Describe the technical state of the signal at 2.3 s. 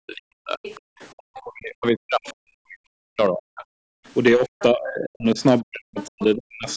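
At 2.3 s there's a lot stacked up. Hard clipping runs through the whole clip: the level is pushed about 5 dB past what the chain can pass, so a small share of peaks get sliced flat, and those flat tops throw off harsh high harmonics you hear as crackly fuzz on the loud bits.

That moment also falls inside a stretch from 1.16 to 3.65 s where the talker's speech sinks, sometimes very deeply, and thins or breaks up in pieces. The likely cause is speech suppressed in double talk: both ends were talking, and the echo canceller couldn't separate the talker from the loudspeaker echo, so it pulled everything down.

Right in that window, from 2.26 to 2.33 s, a brief scrap of a second voice comes through well below the talker. That's likely the other side's voice leaking through: the far end playing on the loudspeaker and the canceller missing a bit of it.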